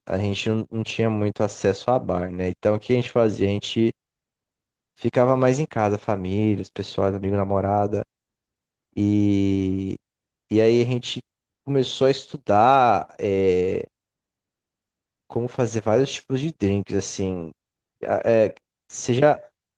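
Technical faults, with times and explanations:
Nothing here counts as a technical fault: the speech simply comes through Opus voice compression running in its full band at 20 kbps, and the coding leaves only a light touch on the sound.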